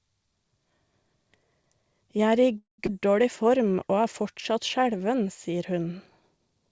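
At 2.58 s the sound stops and a brief buzzy continuation fades out, followed by about 140 ms of silence before the audio resumes at 2.80 s. This call audio freeze is most likely packets held up in transit draining the jitter buffer. Roughly 200 ms of gap is inserted, and nothing is lost.

Immediately after, at 2.86 to 2.89 s, playback skips ahead. Around 150 ms of audio is dropped, probably as the buffer discards backlog to recover the delay it just gained. The two sides join almost directly, with only a few milliseconds of patching.

From 3.44 to 4.98 s, ending just before "sier hun", a jitter buffer slow-down stretches the audio by 126 ms, to 92% speed at unchanged pitch. Repeated pitch periods and pause fragments rebuild the buffer's reserve and make sounds drawn out. Across the clip the call path passes nothing above 8 kHz, which fits a G.722 wideband codec.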